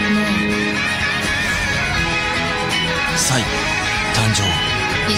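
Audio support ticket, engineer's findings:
No audible defects found on review: level, continuity and timing of the signal hold steady throughout, with no interruptions, distortion or noise events to trace to any component.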